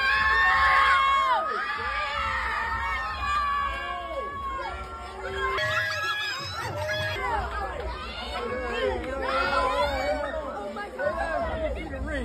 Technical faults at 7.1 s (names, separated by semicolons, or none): section at the wrong speed